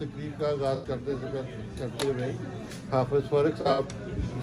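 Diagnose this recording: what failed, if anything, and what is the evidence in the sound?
AAC frame loss with concealment appears at 0.75 to 0.87 s and again at 3.61 to 3.80 s, a codec-stage fault at the decoder after transmission. The first gap is about 85 ms of missing data, which fits four frames, heard as a smeared, phasey patch. The second loses about 128 ms scattered over roughly 170 ms, the longest run around 70 ms. In each gap the decoder rebuilt sound from the last good spectrum, producing noisy, unstable texture instead of silence.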